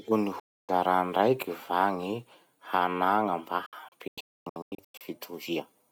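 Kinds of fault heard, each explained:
Digital broadcast dropout: the receiver lost usable frames and muted until good ones returned, so the speech sent in between is gone rather than damaged. One gap runs from 0.40 to 0.69 s. Between 3.66 and 5.01 s the sound breaks into several short holes totalling about 768 ms, the longest 256 ms. Each cut fades in about 3 ms, leaving flat-line gaps in the waveform and sharp-edged, full-height empty columns on the spectrogram.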